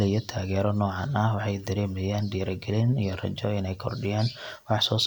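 Nothing in this bit of speech stands out as a technical problem, so there's nothing to point to at any moment along the way.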